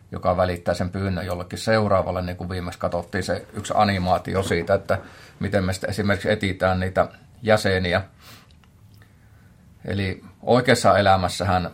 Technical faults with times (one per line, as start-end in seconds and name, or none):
7.36 underrun with held sample